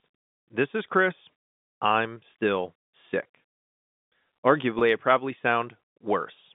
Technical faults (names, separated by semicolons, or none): packet loss with pitch repetition